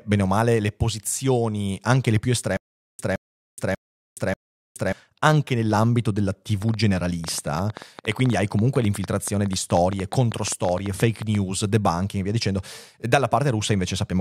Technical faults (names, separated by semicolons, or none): stutter with silent gaps; train of clicks